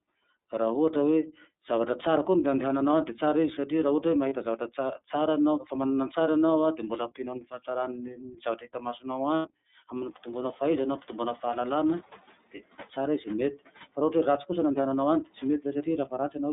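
Throughout, the speech passes through the iLBC codec. The band runs only from about 200 Hz to 3.7 kHz, so there is no air above 4 kHz. Voiced sounds have a slightly rough, synthetic edge, plainly audible and consistent with iLBC's 30 ms mode at 13.33 kbit/s. A plain band-limited line would sound muffled but smooth. Here the graininess comes from coding the excitation, not just from losing the highs.

At 4.29 to 4.33 s come the first lost iLBC frames, a 30 ms gap that fits a single missing frame. The decoder fills it by repeating the last pitch cycle with added noise, so the gap sounds like a brief held, faintly buzzy vowel rather than silence. The voice returns cleanly right after, because each iLBC frame decodes independently and the error does not carry into the next one.

From 7.41 to 7.68 s there is speech cut by the noise suppressor. For about a tenth of a second within that span, soft sounds are pulled down by about 10 dB along with the background, so they seem swallowed or faint. 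This differs from a lost frame: nothing is replaced or held. The real sound is still there, only too quiet.

A second stretch of lost iLBC frames runs from 9.36 to 9.48 s, 90 ms long, which fits three consecutive frames. The concealed pitch cycle is held longer here and fades into breathiness, unlike the short buzz at 4.29 s. Clear speech resumes with "hanampitomboanao fahaizana hampitomboana fahalalana". Room noise becomes more noticeable from around 10 s, but it is part of the recording.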